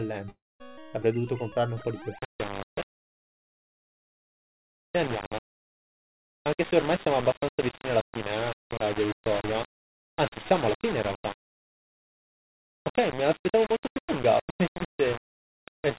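A long network dropout runs from 0.30 to 0.62 s. The sound stops, is carried on briefly as a fading buzz or hiss, then gives way to about 220 ms of silence before resuming. Roughly 300 ms of audio was likely lost in transit and never recovered.

Low bit depth without dither sets in at 2.19 s and lasts to the end. Quiet sounds turn grainy and gritty, and quiet passages sputter or vanish. The cause is likely rounding to only 4 bits, leaving error roughly 10 dB below the signal, which rides along with it, and nothing passes above the call codec's 4 kHz band limit.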